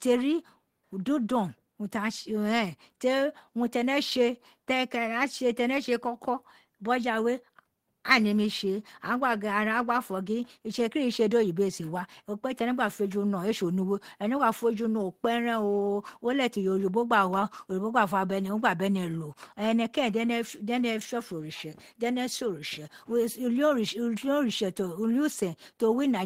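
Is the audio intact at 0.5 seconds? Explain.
Yes, the audio is intact at 0.5 seconds, with no dropout, click, distortion or other fault heard at that moment.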